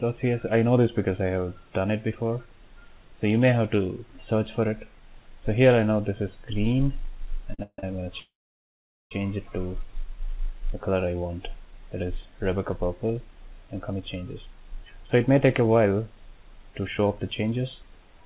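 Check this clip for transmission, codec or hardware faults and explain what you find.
The clip has three kinds of delivery fault, clustered around 7.5 to 9.1 s and at the end. The sound is band-limited to 4 kHz, which fits a G.711-type call codec.

Short stalls from a late packet occur at 7.54 to 7.60 s and 7.79 to 7.84 s. Packets arrived late, so the last sound is held for 45 ms and 34 ms, with a slight buzz or dip.

Call audio freezes run from 7.63 to 7.79 s and from 8.20 to 9.12 s. Likely cause: delayed packets emptied the jitter buffer. The sound fades to silence for 50 ms, then 800 ms, before resuming where it stopped.

A jitter buffer speed-up runs from 13.35 s to the end. Excess buffered audio is trimmed in small pieces, about 0.3 s in total. The sound plays 6% faster at unchanged pitch.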